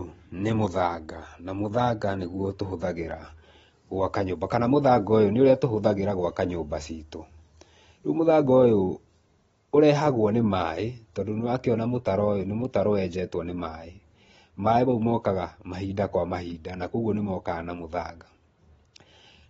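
From start to finish the speech sounds dull and smeared, with nothing above 7.7 kHz and a warbly, fizzy edge on the sibilants. That's likely AAC compression: AAC-LC short of bits, cutting off the top band and quantising coarsely, which fits a bitrate around 24 kbps.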